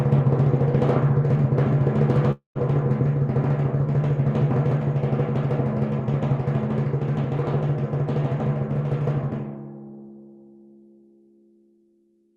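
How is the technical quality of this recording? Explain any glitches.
The recording has one glitch, a gap of roughly a quarter second early on.

Long network dropout, 2.31 to 2.58 s: the sound smears into a fading buzz or hiss, then about 120 ms of near silence, and resumes further on with about 240 ms missing. This is likely a stalled stream whose receiver padded the gap with decaying audio.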